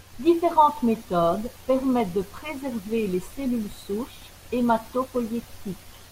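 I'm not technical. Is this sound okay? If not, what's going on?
No, there's a regular click in this speech, about every 1.05 seconds from 0.95 s to 5.16 s, about five in all. That's likely clock drift buffer slips: two devices keep slightly different time, so every so often a few samples get dropped or repeated.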